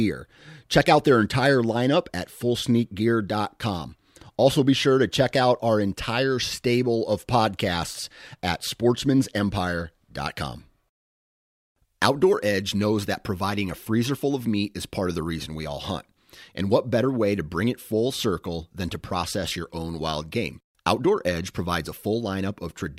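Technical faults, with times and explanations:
No technical faults are heard in this speech clip.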